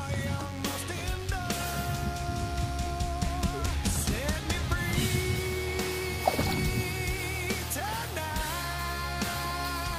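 A nearby DECT cordless phone or its base station is transmitting short radio bursts every 10 ms, and the audio circuitry is rectifying them into the signal path. That is DECT cordless phone buzz, present for the whole clip. The burst rate puts the fundamental at 100 Hz, stacked with many sharp harmonics, so it comes across as a thin, rasping buzz sitting steadily underneath the sound, roughly 20 dB below it.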